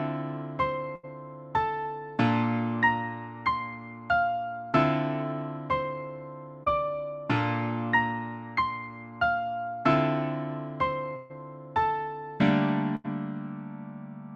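Right at the start, 0.95 to 1.05 s, there's a burst of packet loss. About 80 ms never arrived, so the receiver kept stretching the last bit of sound while fading it, and you get a held, dimming smear before the audio jumps ahead. At 6.63 to 6.68 s there's a short concealed packet loss. Only about 20 ms went missing, and the decoder patched it by continuing the preceding sound and blending back, so it's just a quick wobble. Two more packet-loss bursts hit late. The one at 11.16 to 11.32 s is the longest, with around 140 ms gone, so the faded fill-in lingers. The other, at 12.96 to 13.06 s, drops roughly 80 ms with that same fading hold before the sound picks up further along.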